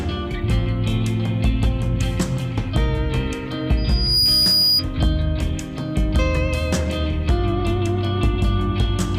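Loudspeaker feedback squeal from 3.77 to 4.84 s: the microphone picks up its own loudspeaker, and around 4.9 kHz the loop gain passes one. That tone swells within about 0.4 s into a whistle standing roughly 5 dB above the sound.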